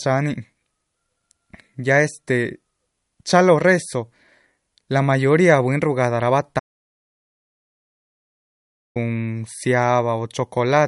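Throughout the speech the treble stops at 11.2 kHz and the sound is watery and swirly, likely MP3 compression at a low bitrate, around 48 kbps. From 6.59 to 8.96 s the audio drops to silence for about 2.4 s, with no room tone, likely an audio dropout to silence from lost input.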